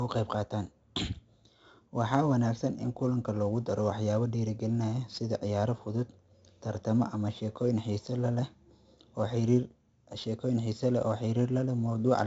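From start to finish the speech carries heavy 4-bit ADPCM compression damage. Each sample is coded as a coarse step from a prediction, so a gritty hiss rides on every loud syllable and sharp onsets distort. Nothing remains above 7.8 kHz, which fits a 64 kbps stream.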